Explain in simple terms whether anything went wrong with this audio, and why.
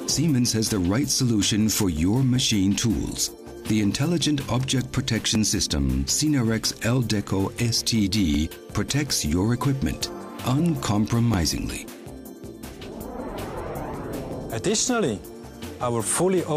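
Audio missing between chunks, at 2.36, 5.35, 8.35, 11.34 and 14.33 seconds. At each of these moments the sound jumps forward slightly, a tiny skip that repeats about every 3 seconds. The likely cause is a recorder handling the audio in 3-second pieces and dropping a very short sliver, only a few thousandths of a second, each time it finishes one piece and starts the next. The two sides are then butted together with no gap.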